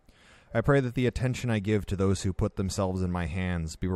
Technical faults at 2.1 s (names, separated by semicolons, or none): none